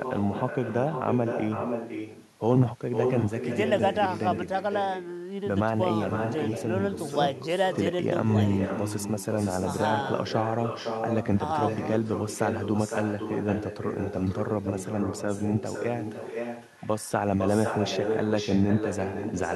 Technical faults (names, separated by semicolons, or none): echo with no canceller